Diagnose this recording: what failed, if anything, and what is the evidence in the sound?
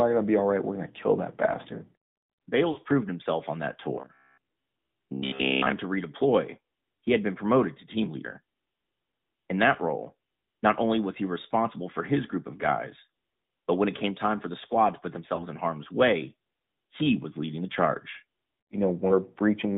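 AMR narrowband mobile codec throughout, at the codec stage: the band is confined to about 150 Hz to 3.7 kHz, with plainly audible buzzy, synthetic colouring that fits a bitrate near 10.2 kbps.

Lost AMR speech frames in the network stage at 2.72 to 2.78 s, before "proved himself on that", and at 15.36 to 15.46 s, after "the squad to put". The decoder stretched the last good settings over 40 ms and 20 ms gaps, so the sound briefly dips and warbles.

Robotic sound from repeated short buffers, 3.96 to 5.73 s, between "proved himself on that" and "to redeploy he had". A rigid 66.7 Hz metallic buzz points to a driver or buffer stage. It is likely repeating about 15 ms chunks in place of most of the real audio.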